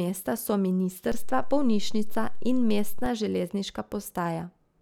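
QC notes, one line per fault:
1.12–3.06 s: DC step. The waveform's zero line jumps by about -23 dBFS at 1.12 s, holds, then returns at 3.06 s. Each sudden baseline shift is heard as a low thump or click at both edges, while the speech continues unchanged.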